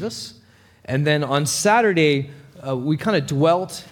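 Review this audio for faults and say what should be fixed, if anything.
No faults can be heard anywhere in this clip, so nothing needs fixing. There is nothing to correct or prevent here.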